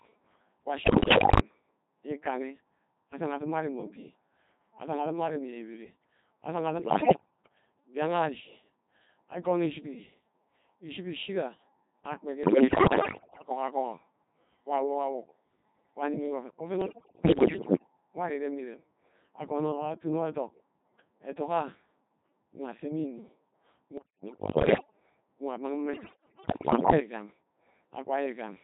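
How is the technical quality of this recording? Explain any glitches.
Technical quality is poor: the speech is heavily vocoded throughout and breaks up in six bursts.

The whole clip sounds robotic and buzzy, because it passed through the Codec 2 vocoder at 2.4 kbit/s, which resynthesises speech from pitch, voicing and spectral envelope rather than the waveform.

At 0.84 to 1.40 s, 6.80 to 7.26 s, 12.44 to 13.50 s, 16.82 to 17.87 s (just before "nwori irem mme irem"), 23.98 to 25.00 s (just before "nwa amang") and 25.94 to 27.00 s, the speech dissolves into warbling bleeps with jumping pitch and level. These are bit errors on digital voice radio: roughly 10 to 15 percent of the bits are corrupted, scrambling whole frames of vocoder parameters.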